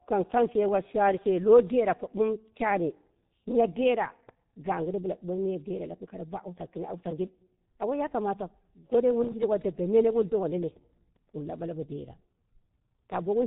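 Throughout the speech, G.723.1 codec damage is heavy: nothing above 3.8 kHz survives, and the slow 30 ms frame updates leave consonants smeared and the voice hoarse, which fits a rate near 6.3 kbit/s. Simple band-limiting would muffle the speech without that rough, hoarse texture.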